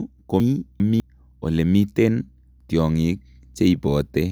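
From 0.4 to 1.0 s the speech runs in the wrong sequence, chunks out of order: one 200 ms block plays two blocks late. Nothing is missing, but the jumble and three hard joins come before "elemiten tiongik". A waveform shows abrupt discontinuities and the spectrogram shows vertical seams at the joins.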